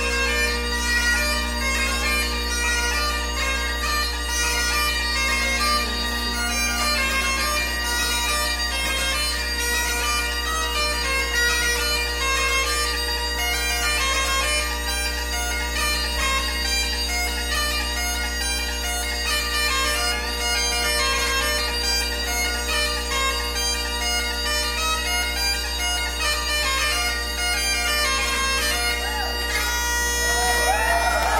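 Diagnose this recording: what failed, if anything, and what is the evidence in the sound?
Mains hum runs throughout: a steady 60 Hz tone with low harmonics, nearly as loud as the signal, from a ground loop or transformer coupling in the analogue wiring.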